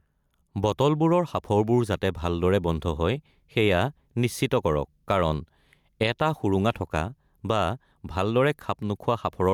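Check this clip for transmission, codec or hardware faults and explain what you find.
One fault is present: gain pumping, running through the whole clip. The gain is pulled down each time the speech gets loud, a swing of around 5 dB. The likely cause is input gain set far too high for the microphone, with a fast limiter or compressor clamping down on every peak and releasing in the gaps. Loud and quiet passages sit unnaturally close together, and the speech sounds squashed.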